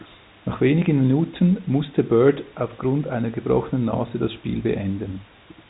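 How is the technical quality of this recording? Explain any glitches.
There are no glitches here: the recording comes through as narrowband telephone speech with nothing in it that sounds like a technical fault.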